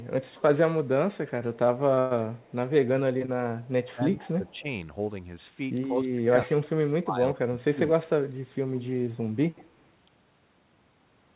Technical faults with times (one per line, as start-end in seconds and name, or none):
0.00-0.42 echo leak
1.94-1.99 short stall from a late packet
1.99-2.24 call audio freeze
2.36-2.53 echo leak
3.26-3.30 short stall from a late packet
3.62-3.68 echo leak
3.93-4.66 speech suppressed in double talk
4.13-4.60 echo leak
5.90-7.80 speech suppressed in double talk
7.85-7.89 echo leak
9.58-9.64 echo leak